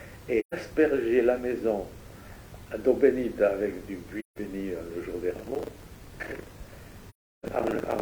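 AAC frame loss with muting opens holes in the audio at 0.39, 4.19 and 7.09 s, lasting about 0.13, 0.17 and 0.34 s, which fits runs of three, four and eight lost frames. The decoder zeroes the missing spectrum, and the overlapping windows fade the sound out and back in, so each gap has soft edges. Buffer tearing sets in at 5.36 s and runs to the end as a rough 25 Hz buzz on the signal. The writer and the hardware reader have drifted until they cross inside each period, so roughly a third of every buffer replays audio from about 70 ms earlier, butted against current audio with hard joins.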